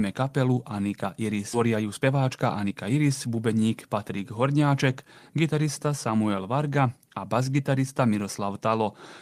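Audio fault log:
1.53–1.55 s, skip ahead: Playback jumps forward with no fill. About 0.7 s of speech is missing. The two sides join almost directly, so the speech lurches.
1.65–3.27 s, jitter buffer speed-up: Speech runs 108% fast at unchanged pitch. Tiny pitch-period pieces, about 0.15 s in total, were cut to drain excess buffered delay.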